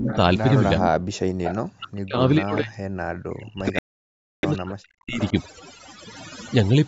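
Right from the start, the speech has the sound of overdone noise removal. The suppressor was pushed too hard, so the background sits near silence with little twinkling specks, and the quieter edges of the voice get scooped out along with the noise.

Between 0.0 and 0.14 s, and again from 0.78 to 0.97 s, the voice dips sharply, by something like 20 to 25 dB at its deepest. That's most likely speech suppressed in double talk: the echo canceller couldn't tell this talker apart from the far end and ducked everything.

Riding on those same spots, at about 0.08–0.16 s and 0.80–0.89 s, there's echo leak. A faint delayed copy of the voice, 435 ms late and sitting a good 10 to 15 dB under the speech, likely slips through because the canceller didn't fully clean the microphone pickup.

At 1.25 to 1.43 s the room sound drops away by about 40 dB, then comes back. That's background gated by the echo canceller, which clamped the mic while the loudspeaker was playing.

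Another 435 ms echo scrap follows at 1.43–1.57 s. Then from 1.76 to 5.21 s the voice keeps getting knocked down and chopped, by as much as roughly 40 dB in places, which is the double-talk problem again.

Inside that stretch, from 3.79 to 4.45 s, the sound cuts to dead silence for 0.64 s and then picks back up. That's likely a Bluetooth stall: the headphone buffer probably ran dry while delayed packets were resent.

A last, quieter echo, about 20 dB down, tails off at 5.15–5.30 s. Nothing reaches above 8 kHz, which is just the call path's normal band limit.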